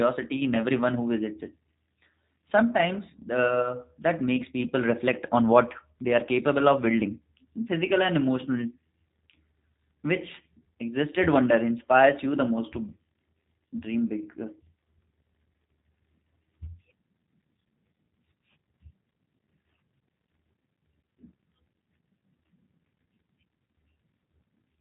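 From start to finish the speech carries G.729 codec damage, a rough, slightly synthetic quality that fits an 8 kbit/s model-based coder, with nothing above about 3.8 kHz. Unlike a plain low-pass filter, the remaining band itself sounds rebuilt and buzzy.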